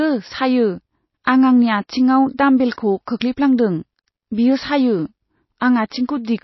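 Throughout, the speech has likely passed through MP3 compression at a starved bitrate, consistent with roughly 24 kbps. The encoder cuts everything above 5.8 kHz and drops weak frequency lines frame to frame, leaving dull, watery, swirling audio with metallic chirps on s sounds.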